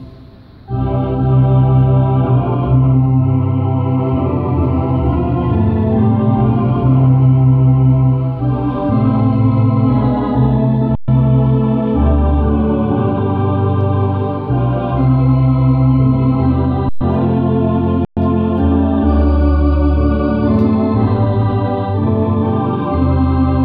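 At 10.95–11.08 s, 16.89–17.01 s and 18.05–18.17 s (about 128, 120 and 120 ms), an underrun with held sample freezes the converter's output. The waveform becomes a flat line and the spectrogram shows blank vertical gaps. Little or no audio is lost, so each gap ends gently as playback picks up where it stopped.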